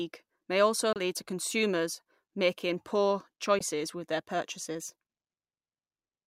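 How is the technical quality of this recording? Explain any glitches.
Two short gaps break up this speech, both sounding like a Bluetooth dropout. At 0.93 to 1.00 s, after "may also", and at 3.59 to 3.61 s, after "to consumers making poor", the sound cuts out abruptly and then resumes as though it had kept playing. The likely cause is packets arriving late to the headphones and being discarded.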